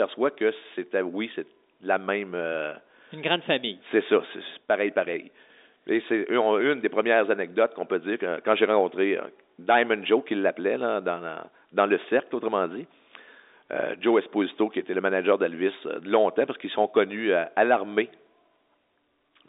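Telephone-band speech, with no audible technical faults.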